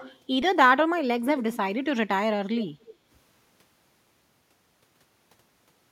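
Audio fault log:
0.0–0.2 s and 2.6–2.95 s, echo leak: A faint, delayed repeat of the speech trails behind it, trailing by about 273 ms each time. At the start it sits roughly 25 dB below the speech. Around 2.6 s it is stronger, near 15 dB down. This is likely one side's loudspeaker being picked up by its microphone, with the echo canceller missing part of that pickup and sending it back.
2.95–3.07 s, background gated by the echo canceller: Right as the stronger echo ends, the room sound ducks by about 6 dB for roughly a tenth of a second, then comes back up. The canceller, reacting to loudspeaker playback, pulled the microphone level down hard to suppress it. That briefly took the background with it, leaving a short dip before the gain was released.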